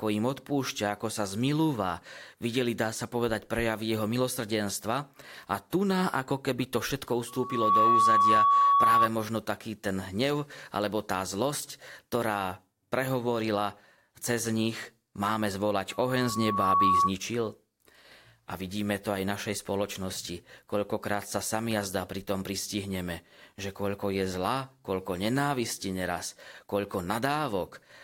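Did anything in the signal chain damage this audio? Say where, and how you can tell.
Yes. Loudspeaker feedback squeal: the loudspeaker leaked back into the microphone, so a 1.1 kHz tone swells for about half a second at 7.28–9.09 s and about a second at 15.90–17.13 s, peaking roughly 10 dB above the speech.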